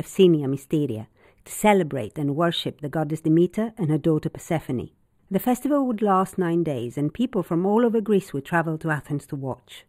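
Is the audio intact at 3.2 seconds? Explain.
No, at 3.2 seconds you're hearing the channel delay (comb filtering) that runs through the whole speech clip. One channel lags by roughly a tenth of a millisecond, a few samples, so the mono sum cancels at evenly spaced frequencies starting around 5 kHz. That gives the top end a hollow, phasey dullness.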